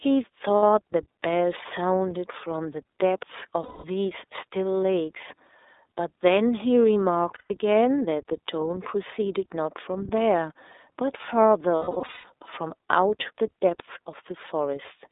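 The speech runs through the iLBC codec from start to finish, confined to a telephone band of roughly 300 Hz to 3.7 kHz, which fits iLBC's 13.33 kbps mode with 30 ms frames. The damage is plainly audible: a rough, slightly synthetic edge on the voice. What separates this from a plain band-limited line is that grainy texture. What separates it from other narrowband speech codecs is that each frame stands alone, so there is no smearing that carries from one frame to the next.

Lost iLBC frames break in four times. The first is a brief 60 ms gap at 0.57 to 0.63 s. Then come 210 ms at 3.62 to 3.85 s and 150 ms at 7.34 to 7.51 s. Last is a scattered stretch from 11.77 to 12.24 s, with 360 ms missing in short bursts, the longest around a tenth of a second. In each gap the decoder repeats the last pitch cycle blended with noise, so the gap sounds like a held, buzzy or breathy vowel that fades during the longer losses. 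A dropout to silence would leave a hole instead. Because each frame decodes independently, the voice snaps back clean immediately, rather than needing a moment to recover.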